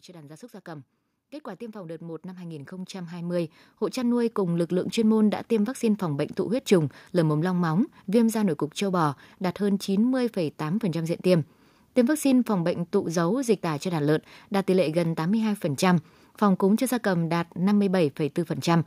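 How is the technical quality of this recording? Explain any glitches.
The recording has one clear fault at the start. From 0.06 to 6.65 s, just before "trùng lở mồm long", automatic gain rising lifts the level by about 18 dB, so speech and background swell together as the control compensates for a quiet input.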